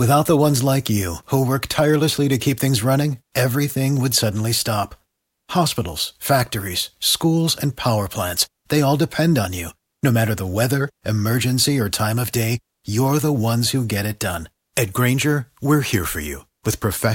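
The speech recording carries no technical faults anywhere in its duration.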